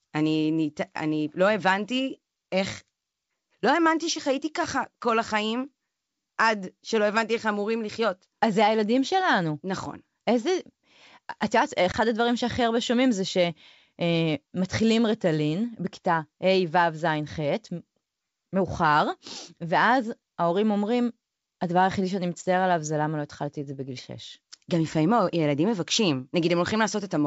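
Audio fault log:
11.92 to 11.95 s, packet loss on an ADPCM call. About 20 ms of speech drops out and is replaced by silence, with abrupt edges on both sides. The length fits a single lost packet. This happens on a G.722 wideband call at 64 kbit/s. The decoder's adaptive predictor and step size miss their updates during the gap, so they no longer match the sender's state. The speech that follows is rebuilt from the wrong starting point until the two sides realign.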